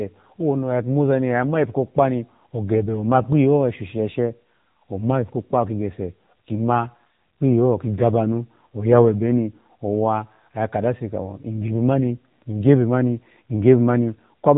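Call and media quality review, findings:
AMR narrowband mobile codec, throughout. Nothing above 4 kHz; speech buzzy and synthetic, pulse-excited vocal-tract model starved of bits, consistent with a low mode near 7.4 kbps.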